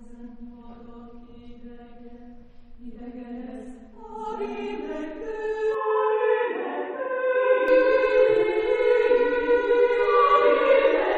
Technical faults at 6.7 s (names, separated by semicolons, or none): input switched to a poorer device